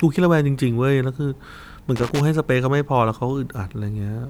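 From 1.96 to 2.21 s, roughly a quarter of a second, the speech is broken up by an irregular burst of crackle and scratching. This is loose connector crackle: a worn or dirty contact in the cable path is briefly making and losing connection as it shifts, so the signal is chopped on and off many times in quick succession, and any DC present on the line turns each break into a pop.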